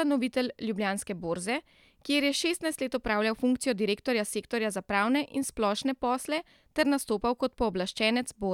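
A speech recording with no technical faults to report.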